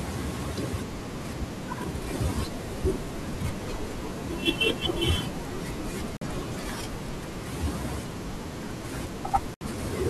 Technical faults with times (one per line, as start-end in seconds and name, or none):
6.17-6.22 Bluetooth dropout
9.54-9.61 Bluetooth dropout